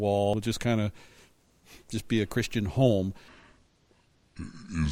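At 0.34 to 0.37 s there is damaged data in a compressed stream. A brief glitch cuts through the speech. Corrupted bytes in the compressed frames made the decoder misread them and lose sync. It then skipped ahead to find the next valid frame header.

From 3.28 s to the end, the speech plays back at the wrong speed. It runs at 0.66 times normal, so it drags and drops about seven semitones in pitch. The likely cause is playback against the wrong clock, which slowed the speech and lowered its pitch together.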